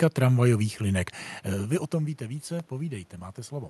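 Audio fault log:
No faults are present in this speech clip. Room noise sits underneath, the level shifts around 1.5 s as the talker moves, and the call path's codec coding leaves the top end rolled off near 12 kHz, which fits Opus at about 64 kbps.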